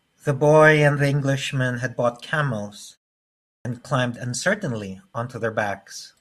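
At 3.6 s the speech resumes abruptly out of silence, its first sounds missing, as about 50 ms is swallowed up to 3.65 s. This clipped start after a pause follows a 0.71 s gap, long enough for the output device to sleep and need time to wake again.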